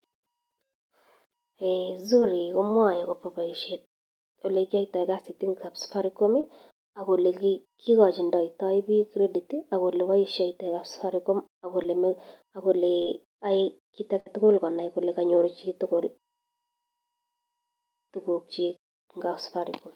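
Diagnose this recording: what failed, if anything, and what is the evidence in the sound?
Network trouble here, showing up as short concealed packet loss: brief smears or wobbles at 2.19–2.23, 6.41–6.45, 11.83–11.86 and 13.02–13.08 s. About 20 ms went missing each time, 40 ms in the last, and the decoder extended the preceding speech to cover it.

There's also a burst of packet loss at 14.20–14.28 s, with about 60 ms gone in one run. The receiver stretched the last sound across the gap and faded it down, so you get a held, dying tail, then the speech jumps ahead with that chunk missing.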